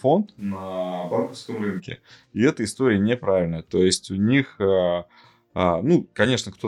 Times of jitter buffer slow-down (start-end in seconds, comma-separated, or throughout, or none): none